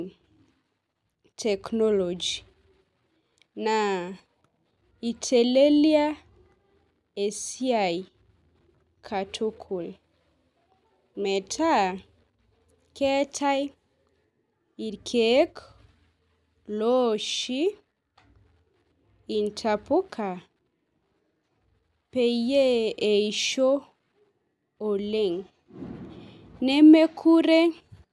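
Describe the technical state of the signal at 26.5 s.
At 26.5 s the speech signal is intact, with no audible technical fault at that moment.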